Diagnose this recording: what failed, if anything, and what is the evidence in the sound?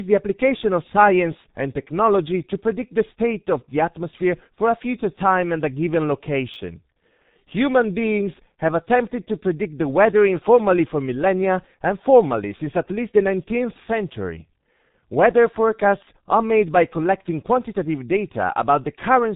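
Throughout, the speech sounds muffled and hoarse, with smeared consonants and no content above about 3.8 kHz. The stage is the codec: this is G.723.1, a low-rate telephony coder with heavy damage, consistent with roughly 6 kbit/s. Its slowly updated voice model and narrow band strip the detail.

A brief jumbled moment occurs at 6.54 to 6.56 s. This is a chunks-out-of-order fault in the buffering or network path. A 10 ms chunk arrived one chunk late and played after its successor. No audio is missing, but the swapped order leaves hard joins.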